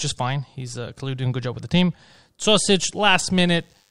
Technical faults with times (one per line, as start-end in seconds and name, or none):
2.50-3.91 DECT cordless phone buzz